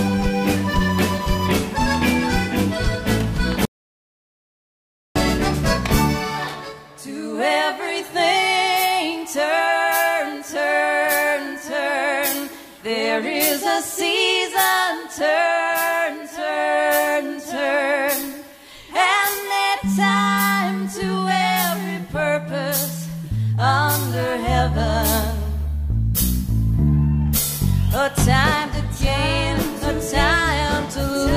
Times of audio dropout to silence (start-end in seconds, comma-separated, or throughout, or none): 3.65-5.16